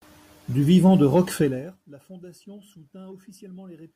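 A speech clip with zipper noise from 1.4 to 1.8 s, after "vivant de": a roughly 25 dB drop taken in audible 2 dB steps, about forty per second, ticking instead of fading smoothly.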